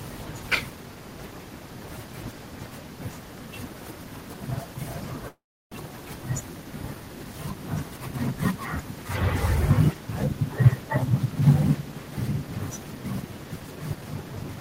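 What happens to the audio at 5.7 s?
At 5.7 s the sound is just coming back from a gap that began at 5.28 s and ends at 5.73 s. The last sound drags on as a fading buzz, then about 330 ms of near silence, and when audio resumes about 300 ms of material is simply gone. This is likely a long network dropout: packets stopped arriving, the receiver padded roughly 440 ms with concealment, and playback picked up later with a timing shift of around 150 ms.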